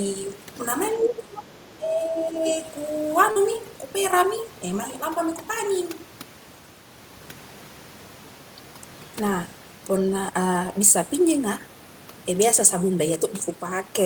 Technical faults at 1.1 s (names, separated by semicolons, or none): overdone noise removal; speech suppressed in double talk